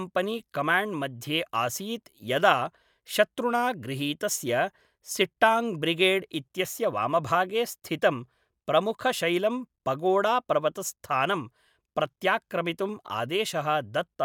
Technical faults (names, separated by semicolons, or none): none